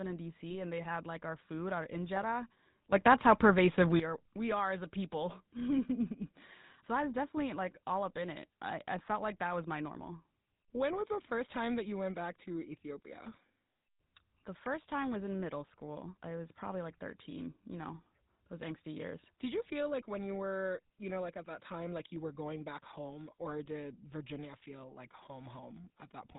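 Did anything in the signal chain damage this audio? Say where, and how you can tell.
Yes. Throughout the clip the speech has a buzzy, gravelly grain, with nothing above 4 kHz, so sibilants sound dull and rough. This is the GSM full-rate codec, and its damage is plainly audible. The sound points to the 13 kbps full-rate coder, which models the vocal tract with a filter and rebuilds the excitation from a thinned, regularly spaced pulse train. The upper band is lost and the excitation comes out coarse.

From 0.50 to 0.57 s, just before "and they had like", the speech breaks into a short squawk and gargle. These are GSM bit errors. Corrupted bits reached the decoder on the transmission side, so the filter, pitch or gain parameters it decoded were wrong and the spectrum and level were misshapen for a few tens of milliseconds. That span fits about three corrupted speech frames.

At 2.92 s, right after "our food our injera", the speech and the background noise jump up together by about 12 dB. 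They stay raised until 4.0 s and drop back before "are we are as". This sudden gain jump was likely caused by a digital gain setting in the call processing or driver stage being switched from one sample to the next instead of ramped.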